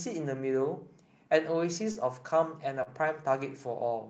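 Speech carried over a call codec band-limited to about 8 kHz, with short concealed packet loss at 1.91–1.98 s and 2.83–2.89 s. Each time roughly 40 ms of audio arrived too late, and the receiver extrapolated the preceding sound before crossfading back, leaving a brief smear.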